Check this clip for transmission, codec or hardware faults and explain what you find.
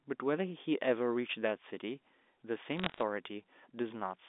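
One transmission fault is audible: bit errors on a digital phone line, between 2.71 and 3.02 s. Across that stretch a scatter of sharp ticks and fine crackle sits on top of the speech while the speech itself keeps its shape. The ticks come from individual bits being flipped in transit at a rate of roughly a few in a thousand. Because the audio travels as G.711 A-law telephone coding, each corrupted bit alters just one 8-bit sample. When the flipped bit is a high-order bit, or the sign of a loud sample, that sample jumps far from its neighbours and is heard as a click. The spread of hits through the window points to errors landing in 16 frames. The underlying line, band-limited to about 250 Hz to 3.6 kHz, is heard carrying the speech beneath the crackle.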